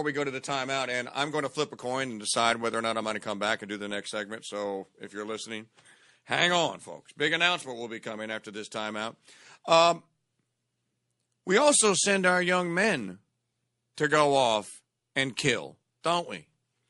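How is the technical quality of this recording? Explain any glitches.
The recording is speech with clearly audible coding damage throughout and two brief smeared attacks near the end.

MP3 compression is the likely cause of the watery, swirly texture across the whole clip, which fits a low bitrate of around 48 kbps. On a spectrogram, the treble stops at a hard ceiling and patchy high bands flicker on and off.

Pre-echo occurs twice. The first is at 13.95 to 13.98 s, just before "to go off and". The second is at 16.01 to 16.04 s, right after "go off and kill". The codec spreads its quantisation noise over a whole block without switching to short blocks. This puts a hiss about 17 dB and about 14 dB above the surrounding floor roughly 30 ms before each attack. On a waveform or spectrogram, this shows as a smeared haze leading into each onset.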